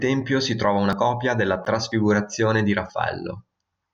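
At 0.93 s, between "si trova" and "copia della", the speech jumps forward: a short piece, around 20 ms, is missing and the two sides butt together with no pause. The same skip recurs at 1.92 s, just after "copia della", and at 2.90 s. This is audio missing between chunks. The roughly one-second spacing points to a recorder or processor that likely drops a sliver each time it closes one 1-second chunk and opens the next. On a waveform each skip shows as an abrupt discontinuity in the wave shape, and a spectrogram shows a thin vertical seam where formants shift suddenly without any silent column.

From 1.65 to 1.66 s, after "copia della", the sound stops for about 13 ms and then resumes with nothing lost. This is a gap between stream segments: the timestamps of two segments don't quite meet, which fits segments of about 2 s, and the player fills the hole with silence. It is heard as a brief hard-edged dropout. 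A waveform shows a flat silent stretch with sharp edges, and a spectrogram shows a narrow blank vertical band, often with faint broadband lines at its edges.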